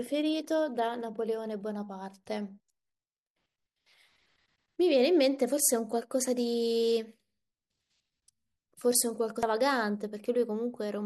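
At 9.43 s, damaged data in the compressed stream makes the decoder misread a frame and resynchronise, producing a brief chirp, squawk, click or short hole in the speech.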